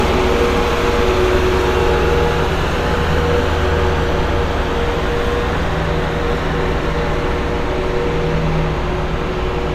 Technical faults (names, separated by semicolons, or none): none